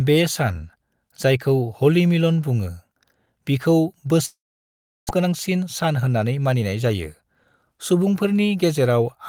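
A speech clip with two linked faults. From 4.25 to 5.11 s there is a gap that sounds like a long network dropout: the last sound is stretched into a fading buzz, then only near-silence remains for roughly 0.7 s, and speech resumes with about 0.6 s of it gone. That hollow stretch and the skipped material set it apart from a brief packet loss, where concealment covers a few tens of milliseconds and nothing audible is lost. Lost packets are the likely cause. Right after, from 5.18 to 6.91 s, a jitter buffer speed-up follows. The receiver, now holding roughly a fifth of a second too much audio, trims short pitch-period pieces repeatedly, so speech runs at about 112% speed and sounds hurried. Unlike a sped-up recording or wrong sample rate, the pitch stays where it was; only the pace changes.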